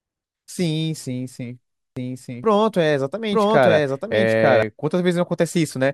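Speech, with a doubled audio track from 1.97 to 4.63 s: a second, equally loud copy runs about a second behind, likely from an edit holding two offset copies. Unlike an echo, it has no decay or room colour and starts and stops abruptly.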